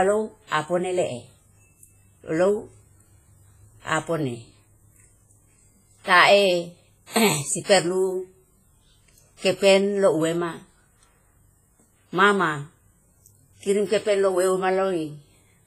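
Speech throughout, with a ringing, washy smear and hiss breathing along with it, nothing above 15.4 kHz, likely heavy WMA compression at a bitrate fitting roughly 24 kbps.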